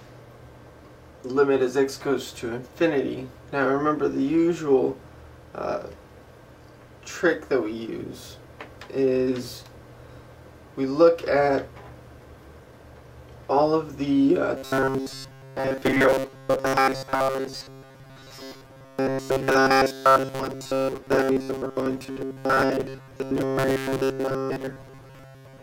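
From 14.57 s to the end at 25.63 s the audio takes on a rigid, metallic buzz at a fixed 134 Hz, still loosely following the underlying sound's shape but flattened into something mechanical. This is robotic sound from repeated short buffers, likely caused by audio arriving too seldom, so the playback side loops a fragment of about 7.5 ms, one period of that buzz, in place of fresh audio for roughly seven tenths of the time.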